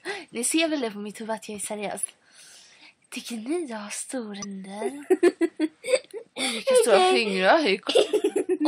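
Damaged data in a compressed stream shows up three times: 2.03 to 2.05 s, 4.42 to 4.45 s, and 7.88 to 7.90 s. Each is a brief chirp or blip of about 20 ms. Corrupted bytes make the decoder misread frames and lose sync until it finds a valid frame header.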